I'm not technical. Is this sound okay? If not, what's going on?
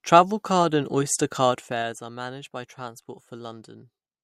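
No. From 1.46 to 2.02 s, just before "are managed by", faint ticking rides on the speech as it gets quieter. This is zipper noise: the volume drops in small jumps, about ten a second, instead of gliding.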